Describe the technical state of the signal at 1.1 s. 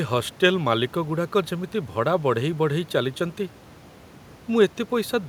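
At 1.1 s the signal is intact, with only the room's own background noise sitting about 24 dB below the speech.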